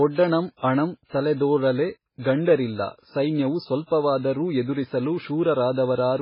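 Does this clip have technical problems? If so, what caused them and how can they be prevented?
Yes. MP3 compression damage runs through the whole clip. The speech sounds watery and swirly, and nothing remains above 5.3 kHz. The likely cause is a very low bitrate, with heavy damage consistent with about 16 kbps. Short of bits, the encoder cuts the treble at that fixed point and drops weak frequency lines that flicker on and off from frame to frame. To prevent it, encode at a much higher bitrate or keep a lossless original.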